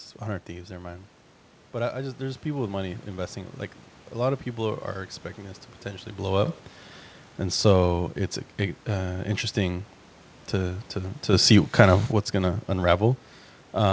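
At 6.46 s, right after "this to potentially blow", the level leaps by about 12 dB for 0.14 s. At 11.33 s, after "to to", it rises by about 8 dB for 0.79 s. These are sudden gain jumps, likely a gain change applied from one sample to the next with no ramp. Speech and room noise get louder together. The waveform shows a square step in the envelope, and the spectrogram shows a uniformly brighter block, capped at 8 kHz by the call codec.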